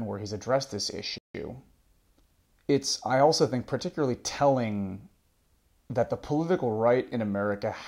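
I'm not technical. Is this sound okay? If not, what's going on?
No. At 1.18 s, right after "where he's addressed this", the speech cuts to silence for about 0.16 s, then resumes: a playback stall, likely the player briefly running short of data.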